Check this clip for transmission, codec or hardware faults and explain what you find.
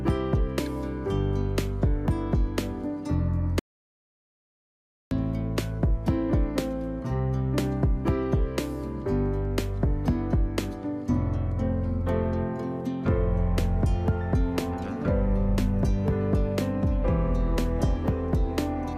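One fault is present: an audio dropout to silence. It runs from 3.59 s to 5.11 s, about 1.52 s in all. The sound stops abruptly and then resumes mid-flow. The gap between is silent, with no background noise or room tone at all. The likely cause is a lost input, such as a disconnected device, a failed link or a stray mute, while recording carried on writing silence. Whatever occurred during that stretch is gone.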